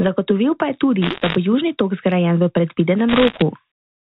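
A burst of sharp ticks and crackle rides over the speech from 1.02 to 1.36 s, right after "pa je tudi", and again from 3.09 to 3.42 s, after "zgrajen v". These are bit errors on a digital phone line. Roughly one bit in fifty was flipped on the G.711 mu-law stream. Each flip corrupts a single sample, and a flip in a sign or high-order bit throws that sample far off, producing a click.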